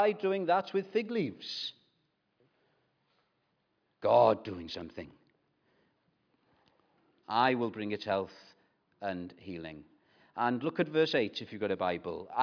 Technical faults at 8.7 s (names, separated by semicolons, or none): none